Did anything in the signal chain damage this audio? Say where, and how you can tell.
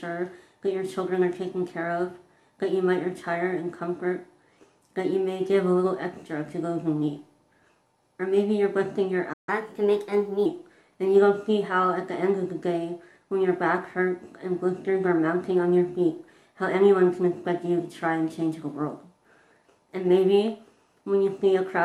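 Yes, at the playback stage. At 9.33 s the sound drops to silence for 145 ms, then resumes at 9.49 s from the point where it stopped. This is a playback stall, likely the player's buffer running dry or its output thread being blocked.

Immediately afterwards, from 9.49 to 10.46 s, the audio runs 1.15 times fast and sounds roughly two semitones sharp, then returns to normal speed and pitch. That is catch-up at higher speed: the player resamples its backlog to recover the time lost in the stall.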